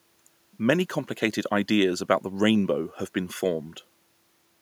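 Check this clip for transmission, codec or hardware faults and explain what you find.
Nothing stood out on listening to this speech recording.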